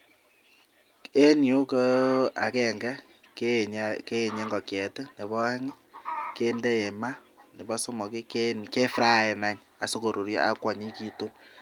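No technical faults are audible anywhere here.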